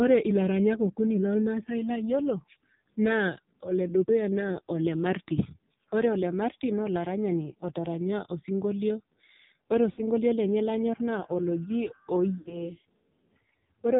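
Speech passed through the AMR narrowband mobile codec at a very low rate, which fits the 5.9 kbps mode. Everything above 4 kHz is gone, and the voice sounds heavily buzzy and synthetic throughout. Lost AMR speech frames, caused by radio errors, made the decoder fill gaps by repeating the last good settings while fading them. About 60 ms is lost from 9.92 to 10.03 s, just before "lenye lanyor naa oloji", and about 80 ms from 12.38 to 12.64 s, just after it. Each gap is heard as a brief drawn-out warble that dips toward silence.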